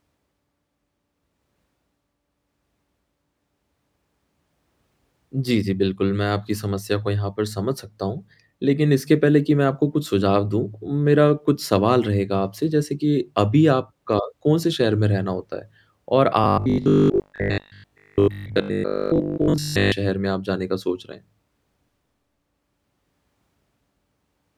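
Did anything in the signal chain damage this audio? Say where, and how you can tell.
Yes. From 16.44 to 19.94 s the speech turns into robotic sound from repeated short buffers: a rigid, metallic buzz at 50 Hz that still roughly tracks the words, which points to a 20 ms chunk being replayed over and over, likely from buffer underruns at the driver or buffer stage, with most of the real audio in that stretch skipped. Unlike mains hum at the same frequency, the buzz comes from the audio itself being repeated rather than sitting underneath it.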